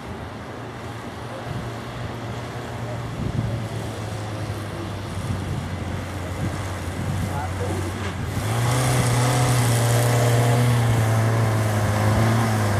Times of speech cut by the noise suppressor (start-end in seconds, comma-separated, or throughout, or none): none